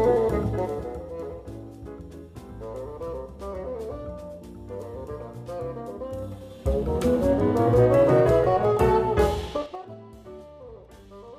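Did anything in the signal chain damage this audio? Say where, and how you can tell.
Yes. Zipper noise at 0.46–1.02 s, 6.13–6.6 s and 9.57–9.94 s comes from a gain stage in the processing chain. Level moves of about 15 dB down, 15 dB up and 25 dB down happen in unsmoothed 2, 3 and 6 dB jumps, about ten a second. Each jump clicks, causing ticking.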